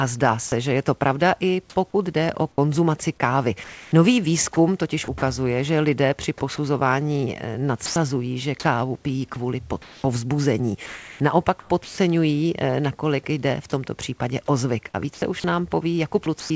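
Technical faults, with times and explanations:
0.48–0.52 s: sound dropped by the voice detector. About 40 ms of speech gives way to steady synthetic noise, likely because the detector misjudged it as background.
1.90–5.22 s, 6.56–7.96 s, 9.34–11.98 s, 14.90–16.50 s: sound chopped by the voice detector. Speech flickers into comfort noise for 480, 120, 820 and 280 ms in total, likely from the detector repeatedly switching off.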